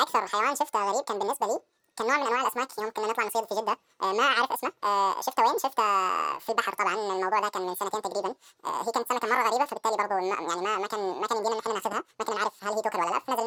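Speech, but the whole thing plays at double speed and a full octave up, the classic sign of audio read two samples at a time. The reader has taken sample pairs as single frames, so everything races by.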